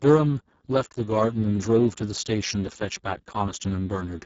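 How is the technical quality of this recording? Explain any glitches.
The technical quality is poor. The whole recording carries heavy Speex codec damage. It is present from start to finish, not in bursts. Speex is a CELP speech coder. It models the voice as a filter driven by an excitation signal. Here very few bits describe that excitation. The sound points to a very low bitrate, around 6 kbps. The speech comes out hoarse, buzzy and noisy, edging toward robotic. Nothing is heard above 7.7 kHz. The upper band sounds like shaped hiss rather than real detail.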